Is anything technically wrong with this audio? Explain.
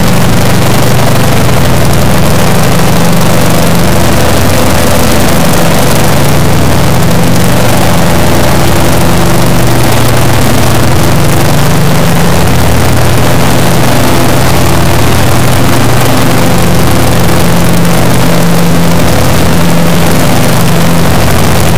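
Yes. An integer read as float fault runs through the whole clip: the samples were written as 32-bit integers but are being read back as 32-bit floats. Those integer bit patterns make no sense as floating-point numbers, so most decode to values either vanishingly small or hugely beyond full scale. The output therefore slams between silence and the clipping limit, heard as an extremely loud, harsh buzzing square wave that drops out to silence during very quiet passages.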